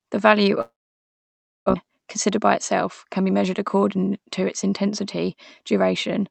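From 0.61 s to 1.86 s there is a long network dropout. This was likely caused by a stretch where no packets reached the receiver. The sound first trails off as a fading buzz or hiss. Most of the gap, about 0.95 s, is silence. When the speech returns, roughly a second of it is simply gone. The receiver does not replay what was lost. Afterwards playback sits slightly later, by a few tens of milliseconds.

From 3.05 s to 3.36 s comes a jitter buffer speed-up. The buffer had built up too much audio. The receiver cut tiny pitch-period slices to shrink it, removing about 40 ms in total. The speech plays about 9% faster while keeping its pitch. It sounds briefly rushed. The Opus path's 8 kHz bandwidth limit applies throughout.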